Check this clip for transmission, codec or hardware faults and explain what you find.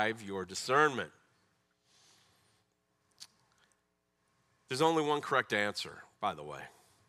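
I checked the clip and found no faults to explain.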